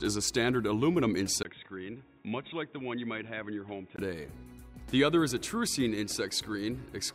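The input was likely switched to a poorer device between 1.43 s and 3.98 s. After a 20 ms gap at 1.43 s, the audio loses everything above 3.8 kHz, drops roughly 10 dB, and carries new background noise about 40 dB below it, then clears at 3.98 s.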